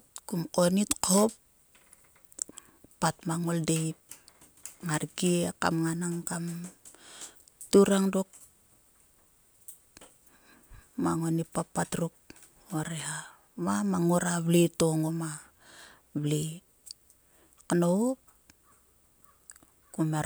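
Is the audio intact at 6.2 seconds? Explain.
Yes, the speech at 6.2 seconds plays through intact, with no audible fault at that moment.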